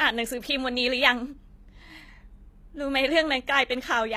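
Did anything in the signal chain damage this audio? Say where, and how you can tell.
Yes. Across the whole speech clip the treble sounds bright but synthetic: s sounds come out gritty and lispy. The codec stage is the likely cause, HE-AAC compression, rebuilding the top band by copying lower bands upward. The damage fits a low bitrate around 24 kbps.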